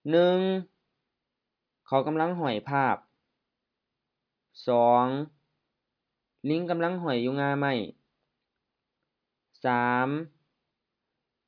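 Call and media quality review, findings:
No faults found in this call and media quality review.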